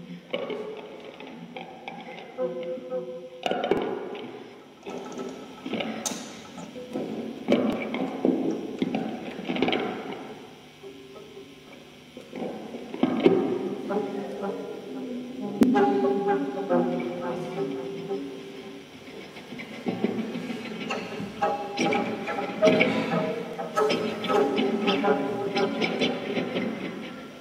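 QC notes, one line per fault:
3.77 s, 7.73 s, 15.63 s, 23.53 s: audio missing between chunks. At each point a short piece of sound, around 50 ms, drops out and the two sides butt together with no gap, so the flow lurches forward. The spacing falls on a grid of roughly 4 s, which points to a recorder or processor likely working in 4-second blocks and losing a slice at each handover between one block and the next.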